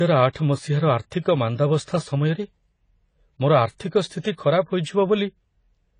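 From the start to the end, the speech sounds dull and plainly smeared, with nothing above 9.9 kHz and a warbling, fizzy texture on sibilants and held vowels. The likely cause is AAC compression at a low bitrate, something near 24 kbps. At that rate the encoder cannot afford the upper band, so it drops everything above the cut-off. It then quantises the remaining spectrum coarsely, leaving gaps that come and go from frame to frame.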